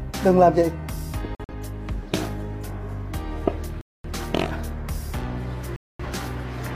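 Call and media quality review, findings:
Corrupt frame muted at 1.35 s, 3.81 s and 5.76 s: abrupt silent holes of 0.19, 0.27 and 0.28 s, each several compressed frames long. Decoder rejected bit-flipped frames, player filled silence, timing intact.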